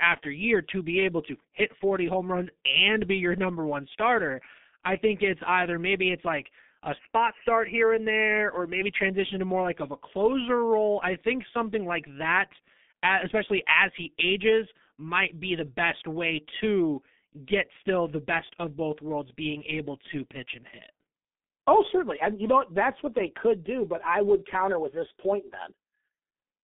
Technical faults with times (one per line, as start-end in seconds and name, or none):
0.00-26.63 G.723.1 codec
6.99-8.81 input switched to a poorer device